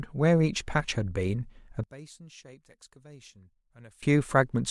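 From 1.84 s to 4.03 s, one stereo channel has likely been inverted in polarity, so the two channels push against each other instead of together. When the pair is heard summed to mono, everything common to both sides cancels, and the centred speech falls by about 24 dB. What remains over that stretch is only the small difference between the channels, a faint trace of the sound, before full level returns at 4.03 s.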